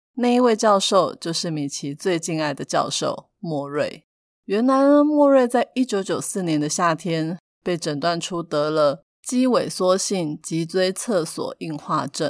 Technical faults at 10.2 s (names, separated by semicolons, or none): none